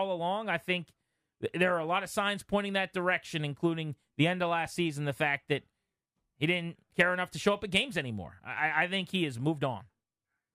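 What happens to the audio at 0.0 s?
Nothing goes wrong at 0.0 s; the speech starts cleanly and plays intact at that moment.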